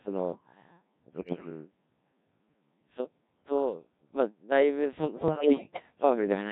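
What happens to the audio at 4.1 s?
Codec 2 vocoder damage is present at 4.1 s, as it is across the whole clip. Only pitch, voicing, energy and a coarse spectral envelope survive, and the decoder rebuilds the speech from sine waves, so it sounds heavily robotic and buzzy, which fits a very low rate near 1.3 kbit/s.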